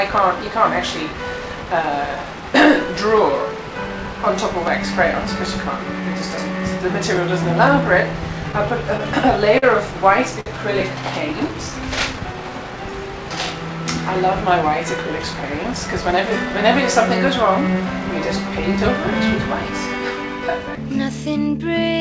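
Short stalls from late packets at 9.58 to 9.64 s and 10.40 to 10.48 s: packets arrived late, the jitter buffer ran dry, and the last sound was stretched by 42 ms and then 56 ms before playback resumed with nothing lost.

Jitter buffer slow-down from 11.51 to 13.37 s: to rebuild its reserve, the receiver repeated single pitch periods, adding 94 ms and playing at 95% speed, so sounds drag at unchanged pitch.

Jitter buffer speed-up from 15.33 to 17.75 s: with too much audio queued, the receiver trimmed short pitch-period pieces, about 150 ms in total, running at 106% speed and sounding hurried but not higher.

Throughout, nothing is heard above 8 kHz, which fits a wideband call codec such as G.722.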